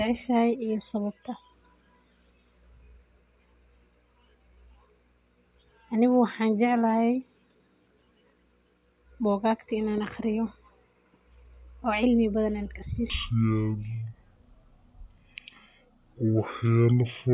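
Speech that plays at normal speed and pitch until 13.10 s, then runs at half speed and drops a full octave (12 semitones) through to the end at 17.33 s. That is a wrong sample rate fault, consistent with 16 kHz material being played back at 8 kHz without conversion. On a spectrogram the harmonics and formants shift down to half their frequency and each syllable stretches to twice its length. The waveform shows visibly longer pitch periods.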